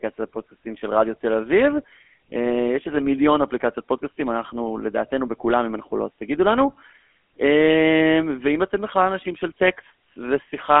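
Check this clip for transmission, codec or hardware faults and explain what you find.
The clip carries one codec fault, present from start to finish: the GSM full-rate codec. The speech is band-limited to a telephone line of roughly 250 Hz to 3.4 kHz, with nothing above 3.8 kHz. The codec models the vocal tract and drives it with a regularly spaced, decimated pulse excitation, which fits a 13 kbps full-rate link. The result is a plainly audible buzzy, gravelly roughness over a dull, narrow-band voice.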